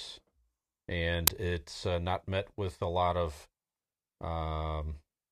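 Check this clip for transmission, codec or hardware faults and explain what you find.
One fault is present, an uninitialised buffer at 1.27 s, just before "it's uh not met". A 5.8 ms block, which fits a 256-sample buffer, was played before audio was written, so stale memory came out as a short, loud crack.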